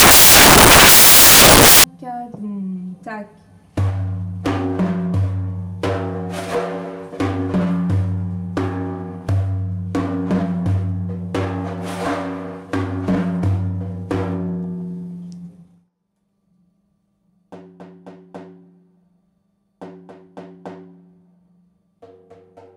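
From the start of the clip to about 1.84 s, the audio is replaced by samples built from the wrong bytes. The reader assembled each sample's bytes incorrectly, through a one-byte offset, reversed byte order or a mistaken alignment. The rapidly changing low-order bits therefore became the most significant part of each value. The result is loud, harsh broadband noise. A spectrogram shows energy spread across the whole frequency range, and the waveform becomes a dense, high-amplitude block until the fault ends.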